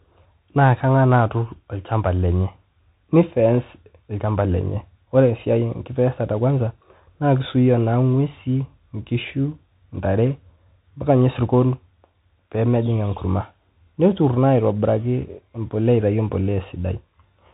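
A speech clip carrying the Bluetooth CVSD headset codec throughout: nothing gets past about 3.8 kHz, the s sounds come out scratchy, and a grainy hiss sits underneath. That's a one-bit up/down coder with adapting steps, which fits a 64 kbps headset link.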